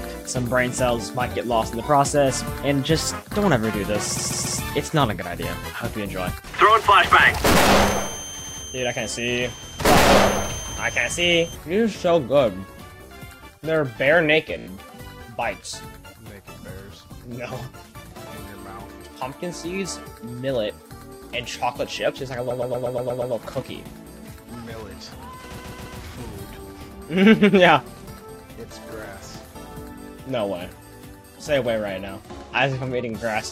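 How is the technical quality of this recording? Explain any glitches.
The recording is marred by five stutters caused by repeated frames. At 4.17–4.59 s a 139 ms block plays three extra times. At 8.43–8.62 s a 93 ms block plays twice more. At 14.58–14.67 s a 28 ms block loops five times. At 22.50–23.33 s a 109 ms block plays seven more times. At 25.57–25.99 s a 139 ms block plays three more times. Each time, a short run of compressed frames was duplicated in the stream, so the decoder replays that slice, and the clip runs nearly 2 s longer.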